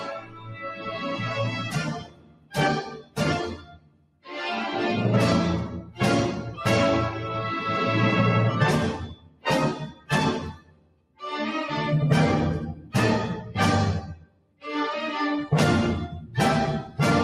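Throughout the clip, a noise suppressor applied to music or sounds mistakes sustained material for noise and pushes it down, so the level swings by around 20 dB. The waveform envelope pumps, and a spectrogram shows tails and held energy fading in patches while onsets stay bright.

The noise suppressor cuts the sound at 0.0–4.29 s, 9.0–11.22 s and 14.08–14.65 s, about 19 dB at worst, and more lightly at 5.82–5.99 s, 12.75–12.94 s and 16.84–16.99 s, about 8–11 dB. These stretches look hollowed and thin.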